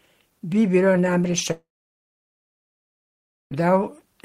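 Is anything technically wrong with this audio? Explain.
Yes. From 1.51 to 3.54 s, right after "bilo namreč", the speech breaks off in what is likely a long network dropout. About two seconds of audio never arrived, and the receiver carried the last sound forward as a fading buzz or hiss. After that there are roughly 1.85 s of near-silence, and the speech returns with that part missing.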